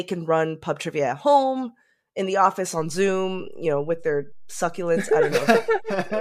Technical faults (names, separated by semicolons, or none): DC step